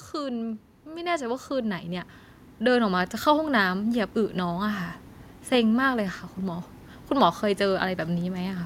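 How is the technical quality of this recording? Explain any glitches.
The main issue is automatic gain rising, running from 0.12 s to 4.92 s. The gain control decided the input was too quiet and kept pushing its gain up, about 12 dB in total, so the speech and the background noise swell together steadily across those almost five seconds.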